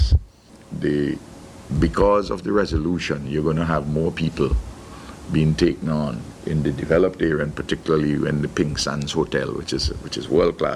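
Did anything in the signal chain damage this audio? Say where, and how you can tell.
No, no chain damage audible.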